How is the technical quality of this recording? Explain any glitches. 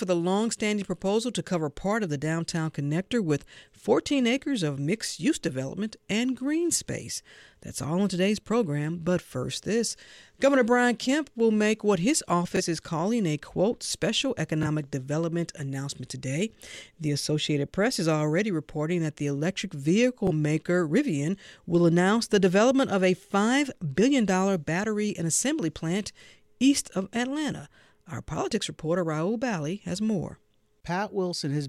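Three brief Bluetooth stutter glitches mar the speech. At 12.56–12.61 s, after "will make what his", at 14.63–14.66 s, after "calling a quote special", and at 20.27–20.32 s, after "reporting that the electric", a packet arrived late or not at all, so the receiver replayed its last slice of about 23 ms, which fits one lost frame. Each sounds like a short hiccup, after which the speech resumes slightly ahead. A waveform shows a small repeated block, and a spectrogram shows a smeared vertical seam.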